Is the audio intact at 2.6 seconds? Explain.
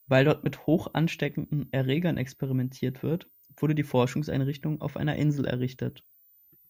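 No. At 2.6 seconds, as across the whole clip, a switching supply whistle sits under the speech: a high tone wandering between about 14.1 and 15.6 kHz, roughly 35 dB down. A power supply cycling audibly causes it, and that moving pitch sets it apart from steady, fixed-frequency interference.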